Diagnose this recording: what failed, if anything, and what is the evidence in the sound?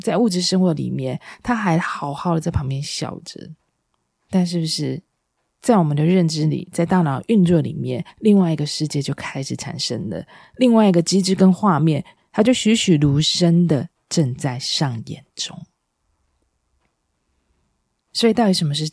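Nothing failed in this recording, and the sound carries no evidence of any fault.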